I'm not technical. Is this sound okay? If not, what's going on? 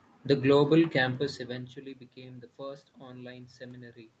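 Yes, this speech sounds fine: the room background and the voice getting quieter or louder around one second in, as if the talker shifted position, are just part of an ordinary call recording.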